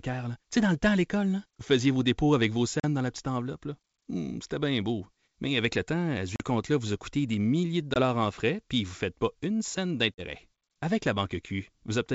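Hard-edged gaps in the speech at 2.80, 6.36, 7.94 and 10.15 s, each followed by briefly distorted speech, point to packet loss on an ADPCM call, where the wideband G.722 decoder's predictor loses step after 20 to 40 ms dropouts.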